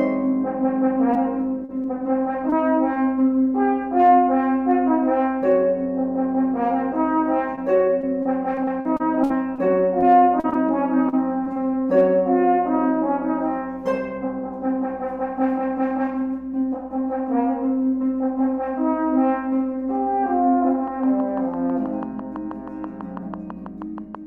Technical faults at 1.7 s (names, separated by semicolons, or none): short concealed packet loss